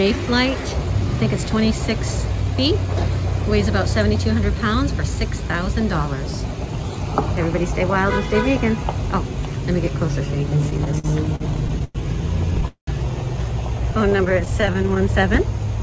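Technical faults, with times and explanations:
10.58–11.97 s, repeated stalls (stutter): the sound drags and hiccups through eleven brief holds, the longest 104 ms. Late packets kept emptying the jitter buffer, so the last sound was stretched.
12.68–12.89 s, call audio freeze: the sound hangs, fades, then drops to about 110 ms of silence before resuming. This is likely a packet delay that emptied the jitter buffer, inserting a 194 ms gap.
14.10–15.09 s, repeated stalls (stutter): thirteen tiny catches, none longer than 14 ms, make the sound flutter. Packets again arrived unevenly, and the receiver repeatedly bridged the short waits.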